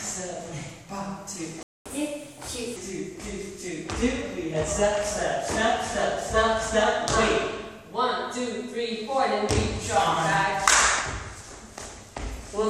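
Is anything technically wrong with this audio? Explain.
Yes, there are two related faults. At 1.63 s there's a playback stall: the sound drops out for about 230 ms, likely because the player ran dry or its thread got blocked. From 1.86 to 2.76 s comes catch-up at higher speed, where the backlog plays at 1.25 times speed and the pitch jumps up by roughly four semitones before settling back.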